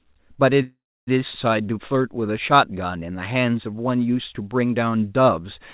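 From 0.62 to 1.09 s there's a call audio freeze, likely from packets stalling on the way so the jitter buffer ran dry. The last sound is stretched into a short fading buzz, then about 300 ms of silence, and the speech picks up right where it stopped, with nothing lost, just 450 ms of delay added.

Then at 1.33 to 1.36 s comes a skip ahead. Roughly 200 ms of speech was thrown out, which claws back some of that delay, and the two sides are butted together with only a tiny 6 ms patch, so you hear an abrupt jump forward.

From 1.62 to 3.82 s the jitter buffer slow-down kicks in. It repeats single pitch periods and slivers of pause to rebuild its reserve, adding 234 ms. The speech drags at about 90% speed with unchanged pitch, and the vowels sound drawn out. The band stays capped at 4 kHz by the G.711 A-law call path throughout.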